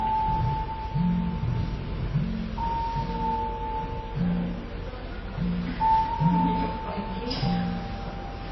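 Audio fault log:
Throughout, transcoding between lossy codecs: the sound is dull and closed-in, with nothing above 5.8 kHz, and smeared, swirly low-bitrate artefacts are heard together with the second codec's own artefacts. The likely cause is a chain of two lossy encoders, pointing to a very low-rate MP3 followed by a moderate-rate AAC-LC. The second encoder spent its bits re-coding the first one's damage and added its own, while the first stage's narrow bandwidth stayed as the ceiling.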